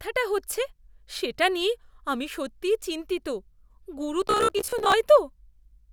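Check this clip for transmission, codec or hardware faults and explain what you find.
One fault stands out, from 4.28 to 4.96 s: robotic sound from repeated short buffers. The likely cause is audio arriving too slowly, so the playback side loops the most recent chunk of roughly 15 ms instead of waiting, with around half of the material replayed rather than new. That loop imposes a steady buzz at about 66.8 Hz, turning the speech into a flat, metallic drone that only loosely tracks the talking.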